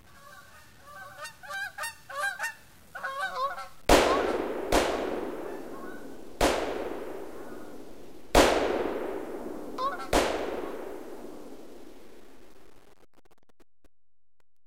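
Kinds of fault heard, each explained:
Low bit depth without dither: quiet passages turn gritty and grainy throughout, likely from truncation to 8 bits; waveform shows visible steps, spectrogram a signal-following noise floor about 30 dB down.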